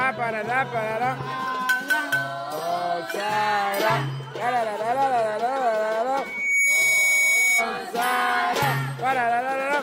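From 6.14 to 7.70 s a loudspeaker feedback squeal takes over: the microphone re-amplifies its own speaker output until 2.2 kHz runs away, swelling over about half a second to sit a few dB above the sound. A spectrogram shows one bright horizontal line; the waveform envelope balloons.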